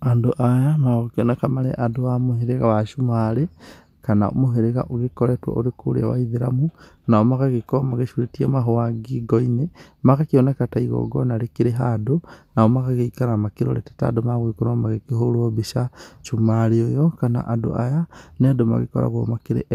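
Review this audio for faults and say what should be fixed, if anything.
No technical faults can be heard in the speech. Nothing needs to be fixed.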